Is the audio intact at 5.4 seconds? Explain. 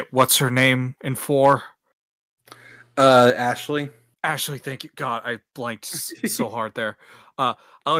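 Yes, the audio is intact at 5.4 seconds, with no fault audible at that point in the speech.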